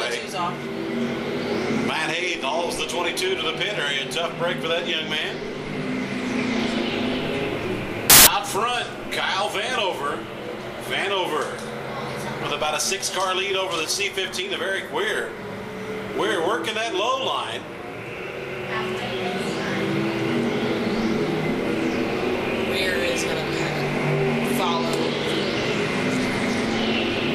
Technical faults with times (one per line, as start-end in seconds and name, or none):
8.10-8.27 samples built from the wrong bytes